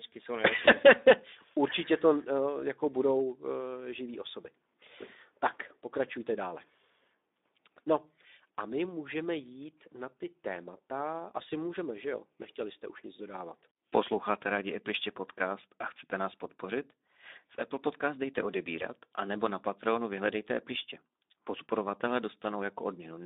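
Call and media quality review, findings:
Speex codec, whole clip: hoarse, noisy speech, band-limited to roughly 250 Hz–3.7 kHz; about 11 kbps leaves the CELP excitation starved, so damage is plainly audible.

VoIP packet loss concealed by the speech codec, 0.65–0.72 s: brief smear as the decoder extrapolates a single lost 20 ms frame, then recovers slowly.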